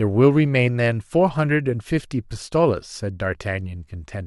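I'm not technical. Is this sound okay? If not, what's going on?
Yes, it sounds fine; nothing is wrong here.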